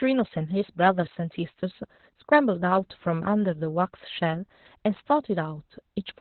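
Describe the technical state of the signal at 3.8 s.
At 3.8 s, Opus voice compression affects the speech, as it does throughout. The band stops near 4.2 kHz, and coarse excitation coding makes it muffled and hoarse, which fits about 8 kbps.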